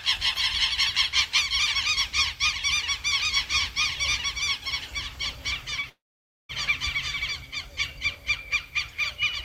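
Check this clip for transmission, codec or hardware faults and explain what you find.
Three faults are present in this recording of everyday sounds.

From 3.20 to 7.25 s there is a doubled audio track: a second, full-band copy at roughly the same level trails by about one and a half seconds. It has no decay or room colour and starts and stops abruptly, which rules out reverb or an echo. An out-of-step edit or a second, slower capture path is the likely cause.

At 5.81 to 5.85 s there is a short concealed packet loss. About 20 ms never reached the decoder, and the receiver continued the preceding sound to bridge the gap before blending back. The result is a brief smear or wobble. Unlike a dropout, the audio never goes quiet.

From 5.89 to 6.51 s there is a long network dropout. About 600 ms failed to arrive. The last sound is stretched into a short fading buzz or hiss, then about half a second of silence follows before the audio resumes further on, with the missing part gone. 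The length and the drop to silence separate it from the brief concealment just before it, and an interruption in delivery over the network is the likely cause.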